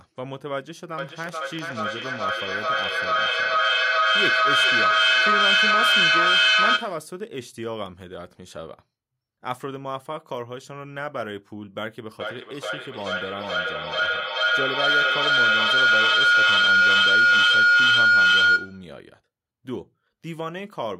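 From 0.98 to 7.22 s there is feedback echo between two devices. Two devices in the same room share the call, and one plays back the other's microphone. The speech returns roughly every 400 ms, thinner and ringing, peaking about 12 dB above the speech.

From 12.16 to 19.02 s a feedback howl takes over. The same microphone-to-loudspeaker loop now gains level on every pass. It narrows to a tone near 1.5 kHz, with repeats roughly 400 ms apart, and reaches about 13 dB above the speech.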